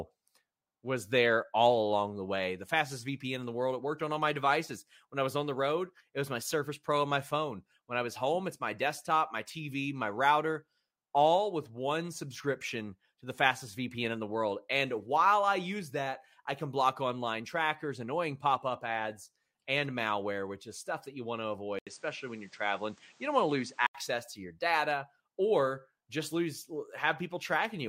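At 21.79 s, after "that you want to", an 80 ms gap leads into duller sound with nothing above 9.1 kHz and a new noise floor. This points to a likely input switched to a poorer device rather than a simple filter, until 23.95 s before "to your data or".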